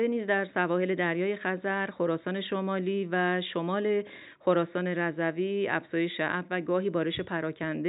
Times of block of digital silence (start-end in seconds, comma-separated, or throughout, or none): none